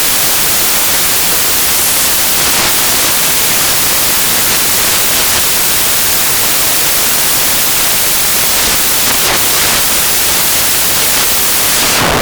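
From start to finish the clip is buried under loud, harsh broadband noise. These are samples built from the wrong bytes. The reader assembles each sample from its bytes incorrectly, whether shifted by one byte, in swapped order or with the wrong alignment. The rapidly fluctuating low-order bits end up as the most significant part of every value, turning fine detail into loud noise.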